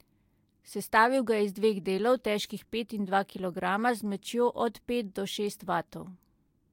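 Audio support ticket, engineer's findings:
Listened through the speech recording in full and nothing stood out; no findings to log against this ticket.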